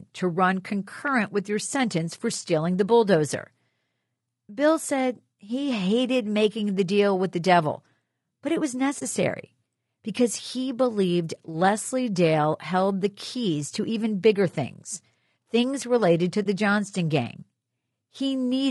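Across the whole 19-second speech clip the voice sounds rough and grainy, with a hiss filling the gaps between the pitch harmonics and a thin, somewhat synthetic top band. The likely cause is low-delay AAC compression (AAC-ELD) at a low bitrate, around 32 kbps. Its short frames resolve voice harmonics poorly and leave too few bits for the detail. Band-limited noise would sit separately under the voice, but this grain follows the voice itself.

Two short holes then open in the speech. The first runs from 8.99 to 9.02 s, just after "devil but it was". The second runs from 16.43 to 16.46 s, just after "things things related to". Each is AAC frame loss with muting: about 20 ms of audio, which fits a single lost frame, was replaced by silence. The overlapping decoder windows fade the sound down and back up, so each gap has soft edges. A hard sample dropout would snap off abruptly and tick.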